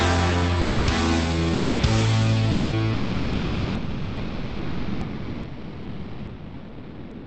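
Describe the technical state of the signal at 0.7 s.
At 0.7 s the sender most likely stopped transmitting because its voice detector, working through Opus discontinuous transmission, judged the incoming audio to be background. This is sound dropped by the voice detector. From 0.61 to 0.87 s, about 260 ms, the real signal is missing and the receiver fills the gap with generated comfort noise. The audio gives way to a flat, steady hiss or near silence, then returns when transmission resumes.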